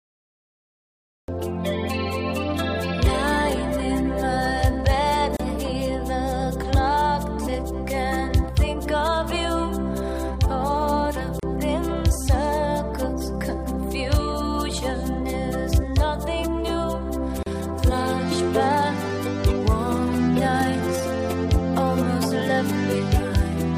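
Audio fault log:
0.00–1.28 s, cut-off start: capture began late, so the clip opens on digital silence and then drops straight into a sound already in progress at 1.28 s. It has no natural attack or fade-in, so the entry sounds abrupt.
5.37–5.40 s, 11.40–11.43 s, 17.43–17.46 s, gap at a join of encoded pieces: separately encoded pieces were joined every 6 s without trimming encoder delay and end padding. Each join leaves a silence of about 30 to 34 ms with smeared edges, after which the sound resumes where it stopped.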